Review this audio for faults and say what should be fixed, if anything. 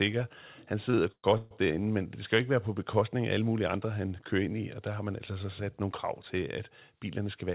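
Repeated stalls (stutter) run from 0.9 to 1.53 s, just before "derinde men det skal". Packets arrived late, so the jitter buffer ran dry four times. The receiver stretched the last sound to fill 306 ms, about half the span. The longest gap is 134 ms. Nothing is lost, but the speech drags. A deeper or better-adapting jitter buffer, or a steadier network, would prevent this.

A jitter buffer speed-up runs from 7.06 to 7.51 s, right after "nogle krav til at". Audio had piled up in the buffer. The receiver cut short pitch-period pieces, about 50 ms in total. Speech plays at 109% speed with unchanged pitch and sounds hurried. Smoother packet delivery, so audio doesn't arrive in bursts, would prevent this.

The sound also stops at 4 kHz, which fits a G.711 mu-law call path at 64 kbps.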